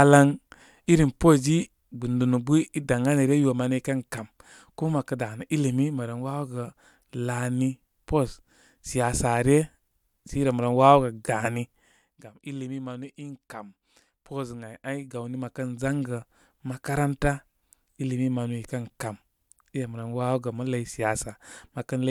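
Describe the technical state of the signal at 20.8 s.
At 20.8 s the signal is intact, with no audible fault and any level movement there coming across as an ordinary smooth fade.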